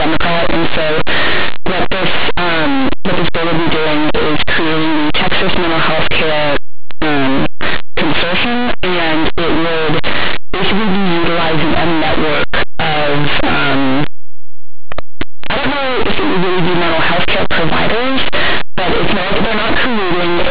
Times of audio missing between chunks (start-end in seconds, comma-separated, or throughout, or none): none